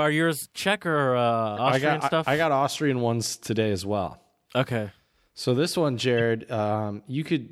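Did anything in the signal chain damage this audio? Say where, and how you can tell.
Yes, at the codec stage: a corrupt frame decoded, twice. After "or uh", at 1.56 to 1.59 s, and after "this one", at 6.18 to 6.22 s, energy lands at wrong frequencies across about two frames. Flipped bits were decoded anyway; concealed packet loss would smooth the gap instead.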